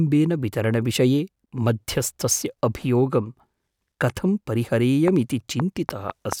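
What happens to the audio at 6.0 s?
At 6.0 s the speech is inside a train of clicks that runs from 5.08 s to 6.33 s, about five sharp pulses at roughly 3.2 per second on an uneven spacing, standing out well above the speech. The likely cause is interference from nearby equipment or a faulty connection or power supply injecting repeated pulses. Unlike a single dropout click, the pulses recur with much the same shape, and unlike dense crackle, they are few and distinctly separated.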